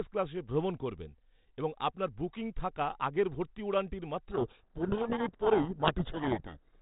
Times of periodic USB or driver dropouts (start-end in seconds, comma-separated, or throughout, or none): none